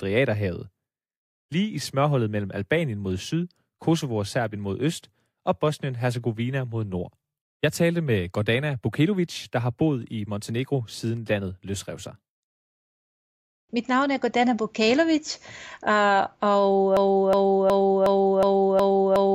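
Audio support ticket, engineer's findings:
Broken-record loop, 16.97 s to end of clip (19.35 s). Same 365 ms speech fragment repeats back to back, 7 times, no recovery. Likely cause: player, encoder or stream stalled, resending its last held fragment. Speech that should have played there is lost.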